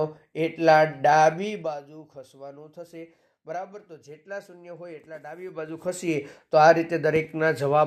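From 1.30 to 1.86 s the level drops by around 20 dB in 2 dB increments, some twenty per second, with no smoothing between them, so each jump leaves a small click and the fade carries a ticking zipper noise. The same fault returns from 5.34 to 6.30 s as the level climbs back by about 20 dB in 2 dB steps, now at roughly ten per second, giving a slower zipping.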